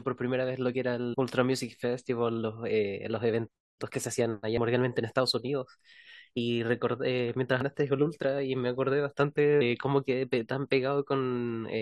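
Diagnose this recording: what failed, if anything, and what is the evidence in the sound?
Damaged data in a compressed stream, at 1.13 to 1.15 s and 7.61 to 7.63 s, heard as brief glitches in the speech. This is a codec-stage fault: corrupted frames are misread or rejected, and the decoder loses sync until it finds the next frame header.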